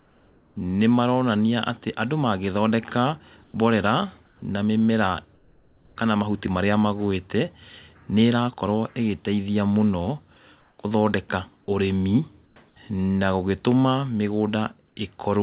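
At 0–0.56, 3.44–3.54 (between "maronania atĩ andũ magĩthondeka" and "mborera na mĩmera"), 4.26–4.42, 5.34–5.96 (before "kana mahuti marĩa"), 10.6–10.78, 12.46–12.56 and 14.88–14.96 s, comfort noise replaces the background. The quiet background, already about 33 to 42 dB below the speech, gives way to a flat, textureless hiss, sometimes up to about 5 dB softer. This is likely discontinuous transmission filling the pauses with synthetic noise. A dropout or noise gate would leave true silence instead. Across the whole clip nothing is heard above 4 kHz, which fits a narrowband telephone codec.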